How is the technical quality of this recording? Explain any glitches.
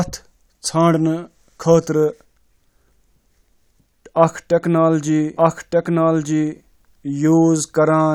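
The recording has one clear fault. From 5.37 s to the end, a doubled audio track appears. A second copy of the speech runs about a second behind, at roughly equal level. It starts abruptly, with no decay or room colour. It likely comes from a second, slower capture path.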